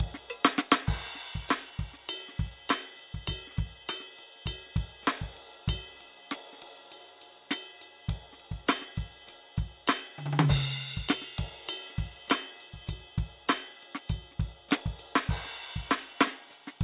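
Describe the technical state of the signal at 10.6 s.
At 10.6 s the music plays through intact, with no dropout, distortion, glitch or other technical fault at that moment.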